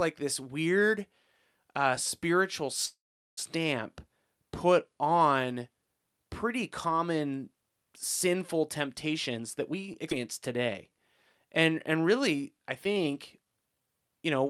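From 2.85 to 3.39 s, just after "uh spiritual", the sound hangs on its last moment, fades, and then goes silent for about 0.4 s before picking up exactly where it stopped. No audio is lost, but 0.52 s of wait has been inserted into the flow. This is a call audio freeze: packets were likely held up in transit, so the jitter buffer ran dry and the receiver stretched the final sound out until data arrived again.

From 9.12 to 9.74 s, right after "pretty common sinful", the speech suddenly sounds rushed while its pitch stays the same. It plays at 116% speed, which is clearly hurried. This is a jitter buffer speed-up. The buffer was holding more audio than its target, so the receiver trimmed out short pitch-period-sized pieces many times in a row, removing around a tenth of a second in total to cut the delay.

At 10.10 to 10.13 s the playback jumps forward, with only an 8 ms bridge joining the two sides. 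That is a skip ahead. About a third of a second of speech never plays, either because it was dropped in transit or because the overflowing jitter buffer discarded it while later audio was already queued.

Two jitter buffer slow-downs follow. From 10.57 to 10.99 s the speech drags to 93% speed, adding 38 ms. From 11.45 to 13.88 s it stretches further to 90% speed, adding 248 ms, so sounds become drawn out while the pitch stays unchanged. In both cases the buffer was either running low or had just raised its target delay. To build up a reserve, the receiver repeated single pitch periods or fragments of pauses over and over.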